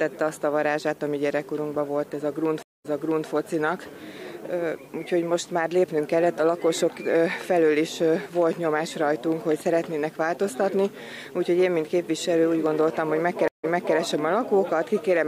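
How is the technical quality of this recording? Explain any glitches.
Two stream reconnect glitches interrupt the recording, at 2.63 s and 13.48 s. At 2.63 s the sound drops out for 218 ms, then resumes 441 ms earlier than where it stopped, so that stretch repeats. At 13.48 s a 157 ms gap is followed by a 325 ms jump backwards. Each time the connection broke, the player reconnected and started a fresh decoder, and the server resent a burst of audio from before the break. On a waveform each event is a flat line followed by a short fade-in of the repeated material. A spectrogram shows a blank vertical band, then a faded-in restart.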